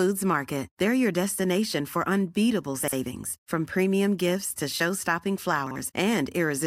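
Chunks out of order at 2.83 s and again at 5.67 s: in each, one block of about 46 ms plays one block late, swapped with its neighbour. Each spot sounds like a brief jumbled stutter in the speech, with three hard joins.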